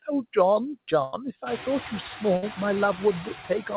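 Noise suppressor artifacts run through the whole clip. The suppressor pulls down the bands it judges to be steady noise by about 10 dB, so the background sinks in the pauses and comes back up under the speech. This is clearest once the room noise rises around 1.5 s.

A burst of packet loss hits at 1.04–1.14 s and again at 2.36–2.44 s. Each time the receiver extends the last sound and fades it, for about 84 ms and then 58 ms. Speech resumes with roughly 80 ms and 60 ms of audio missing. The whole clip is band-limited at 4 kHz, which fits a narrowband telephone codec.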